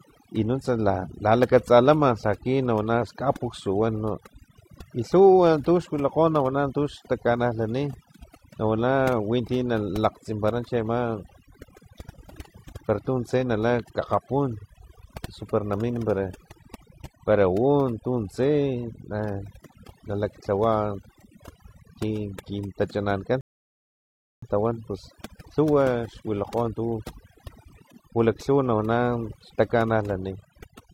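Throughout the speech, overdone noise removal pulls frequency bands near the noise floor down hard, leaving twinkling specks in near-silence, unlike a simple low-pass dullness. From 23.41 to 24.42 s, after "kin kintachanankan", a rebuffering stall inserts about 1 s of silence; speech resumes intact at "tawan pus", so nothing is skipped, unlike a dropout.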